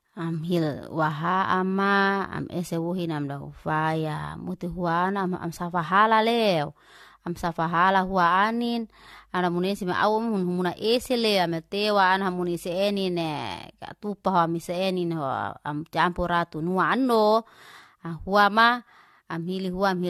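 Throughout the speech, the audio has likely been decoded and re-encoded about four times, with a character that fits AAC-LC at 64 kbit/s. Each pass requantises on a shifted frame grid, so this generation loss piles up as swirly, hollow smearing and blurred attacks.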